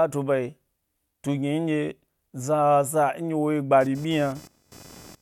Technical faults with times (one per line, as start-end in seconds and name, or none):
3.81-5.22 computer activity noise